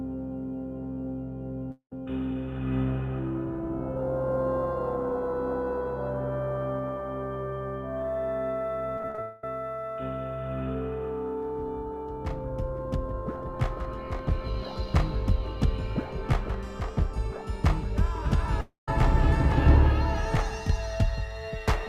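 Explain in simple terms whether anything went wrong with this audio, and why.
A few things go wrong, all around the connection. There are three short holes, at 1.71 to 1.92 s, 9.22 to 9.44 s and 18.61 to 18.88 s. Each one sounds like a fading buzz smearing out the last sound. In the first and last, that buzz dies into a brief silence before the audio comes back. Roughly a fifth to a quarter of a second is gone each time. That's most likely a long network dropout, where nothing arrived and the player covered the gap as best it could.

Just before the middle one, from 8.98 to 9.19 s, the sound turns choppy. That's repeated packet loss: six small gaps, the longest 35 ms, patched over one after another, so about half of that stretch is filler instead of real sound.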